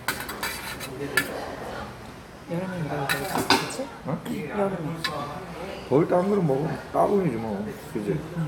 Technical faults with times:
none

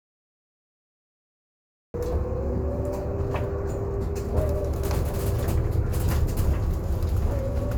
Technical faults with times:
0.00-1.94 cut-off start

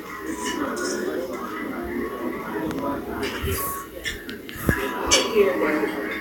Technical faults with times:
0.65-0.67 loud pop
2.71-2.81 loud pop

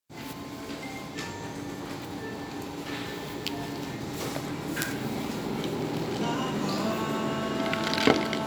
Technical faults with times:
none

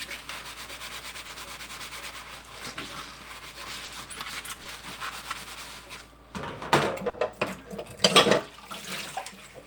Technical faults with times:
1.27-1.31 short concealed packet loss
3.85-3.89 short concealed packet loss
4.63-4.67 short concealed packet loss
7.09-7.15 short concealed packet loss

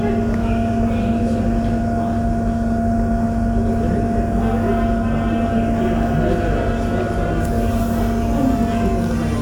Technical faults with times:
none

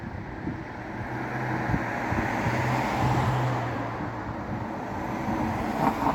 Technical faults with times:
none

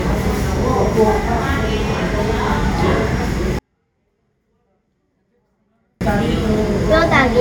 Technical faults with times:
3.59-6.01 24-bit alignment error (too quiet)

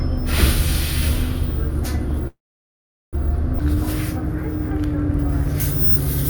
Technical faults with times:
2.27-3.15 call audio freeze
3.59-3.62 skip ahead
5.60-6.29 pre-emphasis left on

